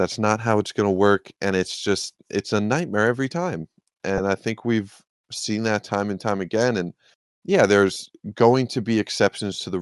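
Throughout, the speech carries a plainly audible breathy, grainy edge in its upper range, where fine detail gives way to a noise-like texture. The likely cause is Bluetooth LC3 compression, working in 10 ms frames at what sounds like about 48 kbps.

From 4.18 to 4.20 s there is a brief noisy smear, and a longer one follows from 7.93 to 7.96 s. These are lost LE Audio frames: the decoder repeated the last spectrum with random signs, covering roughly 10 ms and then 30 ms, which fits one and then three missing frames.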